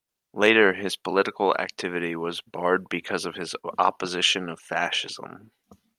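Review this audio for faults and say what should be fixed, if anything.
No faults can be heard in this speech recording. Nothing needs to be fixed.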